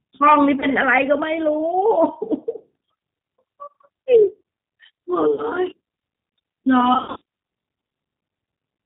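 Right from the start the whole clip carries the sound of the G.729 codec, here the G.729A flavour at 8 kbit/s, and the damage is plainly audible. The codec rebuilds speech from a vocal tract model, a pitch predictor and a handful of pulses per frame rather than the waveform itself, so the voice comes out a bit rough and synthetic, and nothing above 4 kHz makes it through, giving that thin, boxed-in quality.

The first dropout is at 0.60 to 0.66 s, where VoIP packet loss concealed by the speech codec fills about 20 ms of missing audio, which fits a single lost packet. The decoder stretches out its last pitch and filter and fades them, so you get a brief buzzy or noisy smear. A second one runs from 5.34 to 5.44 s and covers about 40 ms, which fits two packets, with the same stretching and a weak voice for a moment after it. The worst is 6.94 to 7.22 s: about 200 ms lost, scattered over 280 ms in runs of up to 60 ms. 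Each frame builds on the one before, so the speech keeps dipping into buzz and faded noise and doesn't settle until a little after the stretch is over.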